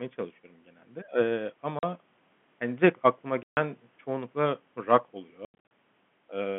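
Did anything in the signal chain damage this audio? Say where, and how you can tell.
Yes, packet loss filled with silence on the network, at 1.79–1.83 s, 3.43–3.57 s and scattered across 5.45–5.71 s: hard-edged dropouts that fit multiples of 10 ms packets.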